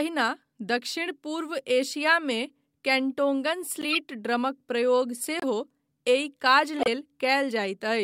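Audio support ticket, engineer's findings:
Corrupt frame decoded: chirp and noise bursts in the speech at 3.81–3.97 s, 5.40–5.44 s and 6.79–6.88 s. Decoder played bit-damaged frames. Misread gains put energy at wrong frequencies.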